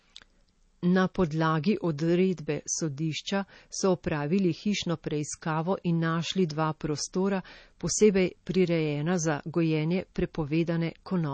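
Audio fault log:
Throughout: MP3 compression. The speech carries a plainly audible watery, swirling texture, and nothing is present above about 8.3 kHz. This is likely a low-rate MP3 encode, consistent with roughly 32 kbps. Short of bits, the encoder cuts the treble at a fixed frequency and discards weak spectral lines, which then switch on and off between frames. That flicker produces the swirl, the missing top end dulls sibilants, and the coding blurs consonant attacks.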